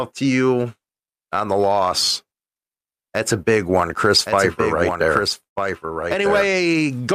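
A speech recording in which, from 4.25 s to the end, a doubled audio track runs: a second full-band copy sits roughly a second behind the original and about 5 dB quieter. Unlike an echo or reverberation, it carries no decay or room colouring, and it cuts in abruptly at 4.25 s rather than building up. That points to the same signal being picked up a second time through a slower path, or to an edit that left two misaligned copies. At 5.43 s to 5.58 s there is a call audio freeze. The sound briefly smears on as a short fading continuation, then drops to about 120 ms of silence before resuming exactly where it left off. What separates this from a dropout is that nothing is skipped: roughly 128 ms has been inserted and everything after it is pushed later by that amount. The likely cause is delayed packets leaving the receiver's jitter buffer empty.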